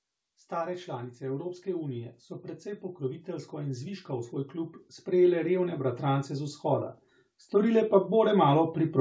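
The automatic gain control judged the input too quiet and began raising its gain at 0.48 s, still climbing through the end of the speech. The voice and the background noise swell together steadily, above a band that stops at 8 kHz.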